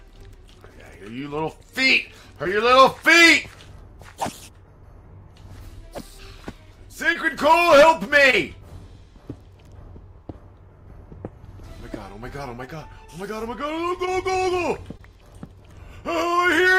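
Short concealed packet loss at 2.43–2.47, 7.13–7.17, 8.31–8.35, 12.65–12.69, 14.05–14.09 and 14.97–15.01 s: each 20 ms gap is patched by extending the prior sound, leaving a brief smear or wobble.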